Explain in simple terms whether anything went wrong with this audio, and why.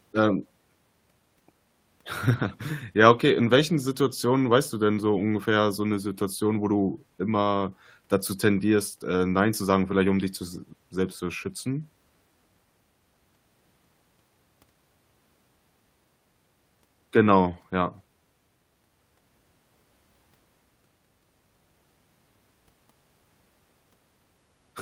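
Nothing stood out as wrong when listening to this speech recording; no problems could be heard anywhere in it.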